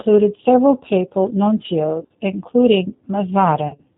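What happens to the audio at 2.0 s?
From 2.00 to 2.11 s the speech breaks up through VoIP packet loss concealed by the speech codec. About 80 ms of audio goes missing across a 100 ms stretch, the longest unbroken gap about 40 ms, which fits eight lost 10 ms frames. The decoder fills each hole by extending its last pitch and vocal tract filter at falling gain. The speech therefore smears into a fading buzzy tone or coloured noise, not dropping to silence or clicking as a plain dropout or splice would. Because each frame builds on the one before, the sound stays thin and distorted for a short while after real packets resume, not snapping straight back.

The moment also sits inside the G.729 codec damage heard across the whole clip, which points to an 8 kbit/s G.729A stream. Speech is rebuilt from a filter, a pitch predictor and a few pulses per 5 ms subframe, with nothing above 4 kHz. The result is a plainly audible rough, synthetic edge. 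Unlike the concealment, this colouring is steady and continuous rather than a brief fading buzz.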